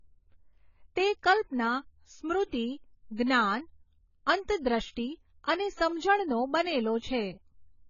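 Throughout the speech, the sound is dull and smeared, with nothing above 7 kHz. Sibilants turn fizzy and sustained sounds warble. This is likely heavy AAC compression. The coder dropped the top band and starved the rest, which fits a very low bitrate near 16 kbps.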